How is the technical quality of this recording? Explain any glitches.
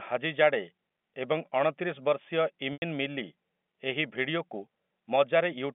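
The recording has one glitch, heard over G.711 telephone coding that limits the speech to roughly 200 Hz to 3.5 kHz. From 2.73 to 2.82 s there is packet loss with pitch repetition. About 90 ms of audio went missing, which fits three lost packets. The receiver filled the gap by repeating the last pitch period, so the sound briefly holds on a buzzy tone, fades into silence, and the speech returns with a short cross-fade.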